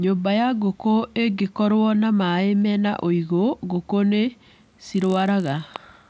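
From 4.54 s, just after "mena ũigũ ngũkũ nĩ", to the end, the resampler restarts on every block: each 20 ms block of the 48 kHz to 16 kHz conversion is processed in isolation, leaving edge errors that form a 50 Hz buzz under the speech.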